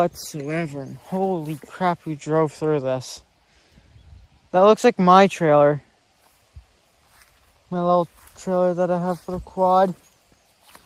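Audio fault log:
No fault is found in this audio.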